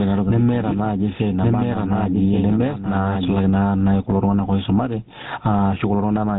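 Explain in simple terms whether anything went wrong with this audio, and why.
Gain pumping runs through the whole clip. The level keeps rising and falling by a large amount, getting pushed down under each loud sound. The likely cause is a microphone level set far too high, with a fast limiter clamping it.

GSM full-rate codec damage is also present from start to finish. This early mobile-phone codec rebuilds speech from a simplified model of the voice and cuts off everything above about 3.8 kHz. That leaves speech sounding muffled, with a clearly audible buzzy, gravelly roughness.

A doubled audio track is already playing when the clip starts and stops abruptly at 3.36 s. A second, somewhat quieter copy of the same sound trails about a second behind the original. Most likely a slower path captured the audio a second time.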